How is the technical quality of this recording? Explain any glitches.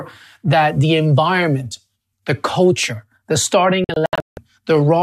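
The recording has one clear fault: a digital broadcast dropout from 3.84 to 4.38 s, right after "environment the culture the". The receiver muted while frames failed to decode, leaving several short silent holes totalling 336 ms across that half second, the longest 168 ms. The programme audio sent during those gaps is simply gone.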